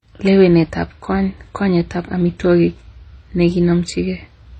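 Transcoding between lossy codecs runs throughout the speech: nothing above 9.6 kHz and layered, swirly smearing. This is likely low-bitrate MP3 re-encoded as HE-AAC, fitting about 24 kbit/s.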